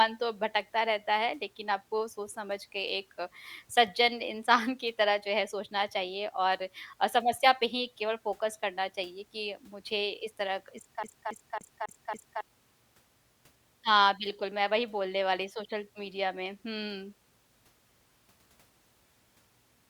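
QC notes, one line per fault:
11.03–12.41 s, CD stuck on one turn: the same 0.28 s of speech repeats five times with a short mute at each jump, an even skipping-disc stutter.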